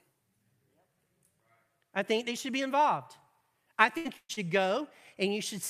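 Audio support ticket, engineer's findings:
Burst of packet loss at 3.97–4.07 s and 4.17–4.31 s. Network jitter or loss, receiver-side concealment. Last sound extended about 75 ms, then about 122 ms, ending in about 50 ms of silence. About 80 ms and 120 ms of speech lost. Unlike a short loss, the fill is a held buzz or hiss that fades away.

Short concealed packet loss at 4.33–4.39 s. Same network path, decoder concealment. About 38 ms of continued or shaped-noise fill covering about 40 ms of lost speech, then a crossfade back. Heard as a brief smear or wobble, not a held, fading tone.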